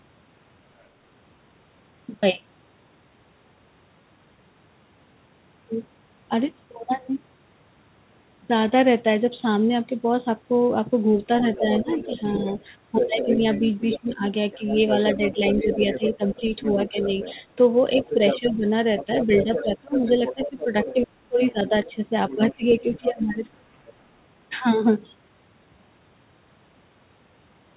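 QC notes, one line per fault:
0.80–0.84 s and 11.39–23.93 s, other side's voice leaking through: a faint blip of a second voice near 0.8 s, roughly 40 dB under the main talker, then a much stronger stretch from 11.39 s to 23.93 s at only about 10 dB down, sitting under the speech. Likely the far end playing on the talker's loudspeaker and the echo canceller not fully scrubbing it from the mic.
11.59–12.96 s, 13.96–17.06 s and 18.15–23.45 s, speech suppressed in double talk: while that second voice is present, the main talker keeps ducking. Around 0.2 s is affected in the first run with dips of about 10 dB, around 0.7 s in the second with dips to about 15 dB, and about 2 s in the last with dips as deep as about 25 dB. The canceller likely couldn't tell the talker from the echo and pulled both down. The band tops out at 4 kHz throughout, which fits a G.711 mu-law call path at 64 kbps.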